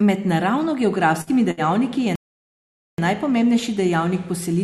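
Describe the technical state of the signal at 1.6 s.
A burst of packet loss from 1.51 to 1.60 s left a gap the receiver filled by stretching and fading the last sound, dropping about 60 ms before "je najpomembnejši".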